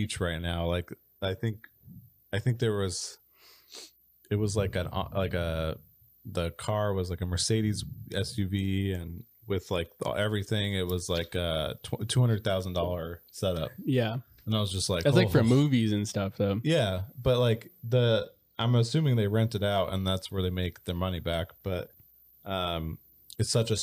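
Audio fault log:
17.93 to 19.04 s, channel delay (comb filtering): between "but like" and "they rent it out" the speech turns dull, with the top end thinned out. One channel runs late by a delay of about two samples, a few hundredths of a millisecond. When the two channels sum to mono, their shared content cancels at evenly spaced frequencies. A delay this short puts the first notch around 10 kHz, so it cuts the airy high end.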